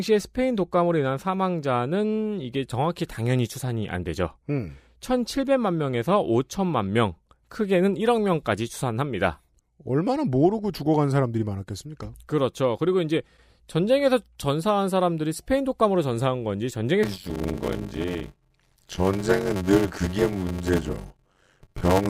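From 17.03 s to the end, a block size mismatch (padded) sets in. Zero-filled gaps cause a buzz near 93.8 Hz, which fits a 512-sample read. Speech slows to 0.625 times normal speed with its timbre unchanged.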